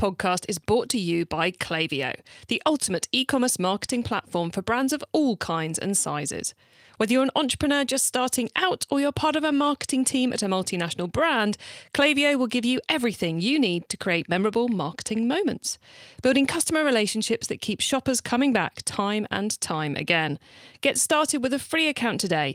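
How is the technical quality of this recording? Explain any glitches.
No glitches or technical faults can be heard anywhere in the recording; the signal stays continuous and stable throughout.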